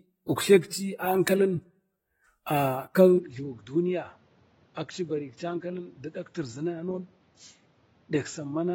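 From the start, the speech carries plainly audible AAC compression damage. Sibilants and sustained sounds have a warbling, fizzy smear, and nothing is present above 16.6 kHz. That fits AAC-LC at around 24 kbps, likely squeezed to a low bitrate. A simple low-pass filter would leave no such swirl.

At 3.18 s the input is likely switched to a poorer device. The band abruptly narrows to nothing above 7.2 kHz, the level drops by roughly 10 dB, and a new noise floor sits around 30 dB down. There is no gap at the switch. The sudden change in tone, level and noise at one moment sets it apart from steady codec dulling.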